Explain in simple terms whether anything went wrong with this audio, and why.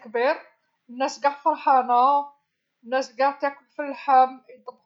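Listening to the recording, nothing stood out as having gone wrong with the sound at any point.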